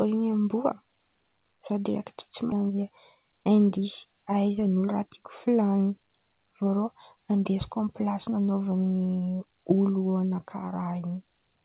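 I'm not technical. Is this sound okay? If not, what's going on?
No. At 2.52 s there is a skip ahead: about a second of speech was dropped and playback jumps straight forward, with the two sides joined almost without a gap. From 2.62 to 4.13 s a jitter buffer speed-up follows. The receiver trims tiny slices to catch up, so speech runs about 8% faster at the same pitch and sounds slightly hurried. The call connection's telephone-style sound, with nothing above 4 kHz, is heard throughout.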